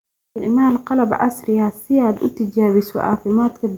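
No technical faults are audible anywhere in the recording.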